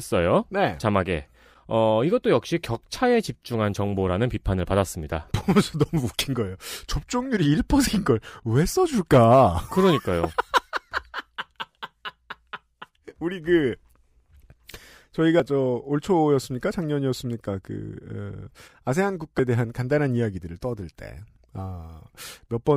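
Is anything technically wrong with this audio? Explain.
Yes. Compressed frames skipped at 7.87 s, 15.40 s and 19.39 s: whole frames of about 93 ms were lost or rejected by the decoder, so the speech jumps ahead by roughly two, one and three frames.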